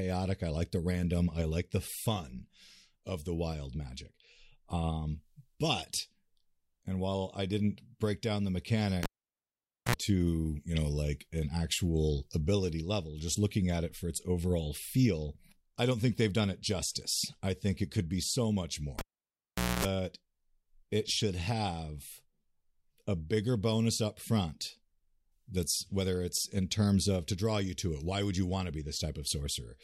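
The cable is pulled and plugged in twice. At 9.03 s, after "didn't break down the", a pop cuts the speech to near silence for about 0.87 s. A 67 ms burst of 60 Hz mains buzz follows as the plug's tip touches first, then a second pop before "to you know like". At 18.99 s, after "could be so much", it repeats. This time the sound is gone for 0.81 s and the buzz lasts 247 ms, ending at 19.85 s.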